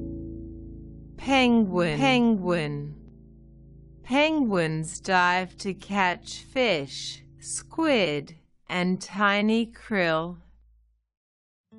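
The audio carries a doubled audio track between 1.22 and 3.08 s. A second full-band copy of the same sound runs around 0.7 s behind the first, about as loud as the original, with no decay or room colour on it, and it cuts in and out abruptly at those edges. That points to the signal likely being picked up twice, through a slower second path or an edit leaving two out-of-step copies stacked.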